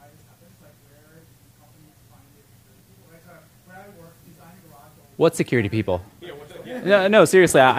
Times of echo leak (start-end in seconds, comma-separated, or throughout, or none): none